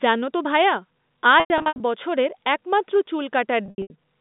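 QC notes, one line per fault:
1.4–1.8 s, packet loss with pitch repetition: scattered losses totalling 260 ms. Repeated pitch periods give a held, buzzy tone, and the 100 ms run fades briefly to silence.
3.66–3.9 s, packet loss with pitch repetition: 180 ms lost across 240 ms. Gaps are bridged by repeating the last pitch period, and the 80 ms run decays toward silence.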